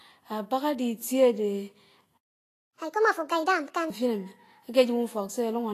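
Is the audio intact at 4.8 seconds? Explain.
No. At 4.8 seconds, as throughout, there is plainly audible grainy hiss with nothing above 14.2 kHz, likely from Vorbis compression at a low bitrate coarsely quantising the treble into noise.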